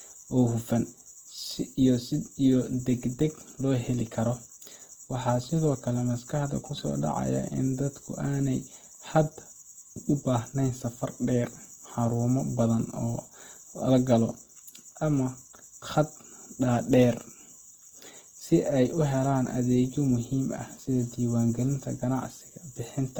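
From start to finish the speech carries plainly audible Opus compression damage, with a grainy, rough texture in place of clean tones. The likely cause is the codec's music (CELT) mode, starved of bits at a rate that fits around 16 kbps. Band energies survive, but their fine detail is filled with folded copies or noise. On a spectrogram the harmonics look smeared and speckled, with few true holes, while full bandwidth holds up to 20 kHz.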